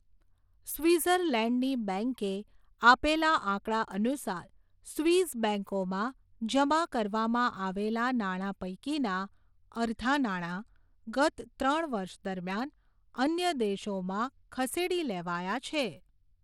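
Bluetooth SBC compression runs throughout, from 0 s to the end: the speech has plainly audible coding damage and nothing above 17.2 kHz, likely from SBC's coarse sub-band quantisation starving the top bands of bits, which fits a low bitrate near 96 kbps.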